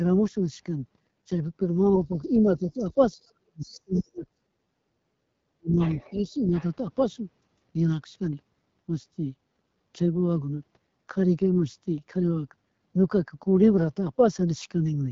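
AMR wideband (HD Voice) codec damage runs through the whole clip. At 8.85 kbit/s, the second-lowest AMR-WB rate, the pulse-excited vocal tract model cannot follow the speech closely, so it sounds rough and raspy. Nothing reaches above about 7.2 kHz, and the top band is only shaped noise.

From 2.44 to 5.0 s, speech suppressed in double talk affects about two seconds of the talker, with drops as deep as about 40 dB. It returns at 5.57 to 5.77 s with another deep cut of about 40 dB, and at 6.13 to 6.51 s as a shallower dip of about 5 dB. The likely cause is an echo canceller that could not tell near speech from loudspeaker echo and attenuated both.

The other side's voice leaking through appears as scraps at 2.79 to 2.93 s and 3.24 to 3.32 s, about 30 dB below the speech, and at 3.94 to 4.01 s, about 20 dB below. A longer stretch follows from 5.79 to 6.66 s, only about 15 dB down, likely residual loudspeaker echo that the canceller missed.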